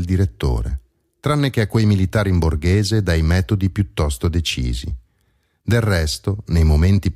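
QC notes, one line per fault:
No faults found in the speech. Nothing in the recording calls for a QC entry.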